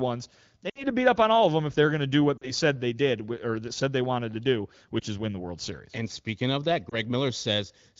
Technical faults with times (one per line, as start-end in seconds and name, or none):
0.70-0.84 lost AMR speech frames
2.37-2.51 lost AMR speech frames
5.00-5.04 lost AMR speech frames
6.90-6.95 lost AMR speech frames